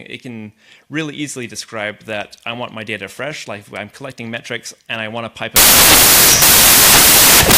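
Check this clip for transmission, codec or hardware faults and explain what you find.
There's one clear fault, and it takes over the tail end. From about 5.56 s to the end, the samples are built from the wrong bytes: the reader pairs them up misaligned or in swapped order, so the jittery low bits become the big part of each value. The sound turns into loud, harsh broadband noise.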